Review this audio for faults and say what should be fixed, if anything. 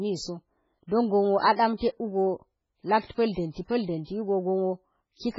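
Throughout the speech, nothing reaches above 7.5 kHz, s sounds turn metallic and attacks smear. The likely cause is heavy MP3 compression at a very low bitrate, around 16 kbps. The encoder cuts the treble and lets weak frequency lines flicker from frame to frame, which makes the sound watery and swirly. A plain low-pass filter would dull the top end without that warbling. To prevent it, encode at a much higher bitrate, or keep a lossless master and compress only once at the final stage.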